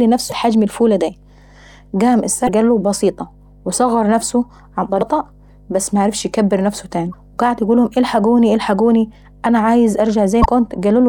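Underneath the whole clip there's a steady 50 Hz mains hum, sitting well below the speech but always there as a low drone with a few harmonics stacked on it. That's power-line energy leaking into the signal path, most plausibly through a ground loop or from a transformer sitting close to the cabling. It never changes in pitch or level.

On top of that there are five short glitches from damaged data in a compressed stream, each roughly 45 ms long: at 0.28 to 0.32 s, just before "حجم الفولة داي"; at 2.45 to 2.49 s, just before "قاله بسيطة وصغر نفسه"; at 4.98 to 5.02 s; at 7.10 to 7.14 s, between "بس معرفش ايكبر نفسه" and "وقعد يقولهم الحقوني"; and at 10.41 to 10.46 s. Each time, the decoder hit corrupted bytes, lost frame sync and had to hunt for the next header. The result is a brief glitch in the audio.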